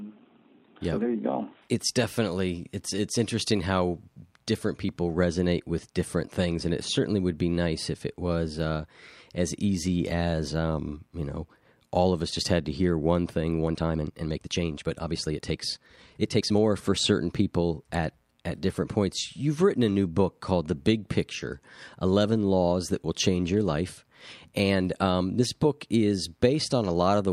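From 13.60 to 16.62 s, between "to hear one thing" and "for certain people at", a time-stretched section plays about 1.43 times faster, sounding rushed. Pitch stays unchanged, unlike a sped-up playback; software likely dropped short pieces to shorten it.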